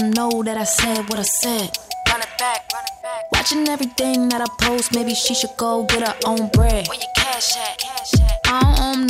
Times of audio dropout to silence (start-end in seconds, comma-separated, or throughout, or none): none